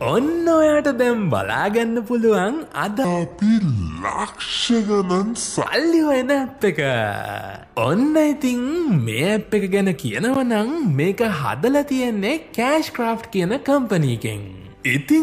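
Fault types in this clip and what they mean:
Section at the wrong speed: From 3.05 s to 5.66 s, the sound slows abruptly to about 0.685 times its proper rate. Pitch drops with it, by roughly seven semitones. Everything in that stretch turns deep and dragging. At 5.66 s the normal speed and pitch return at once. Both changed together, which points to playback against the wrong clock. The likely cause is an edit or player that resampled this section at a mismatched rate.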